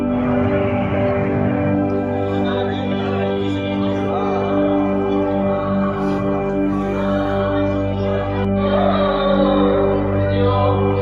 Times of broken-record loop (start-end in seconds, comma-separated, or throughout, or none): none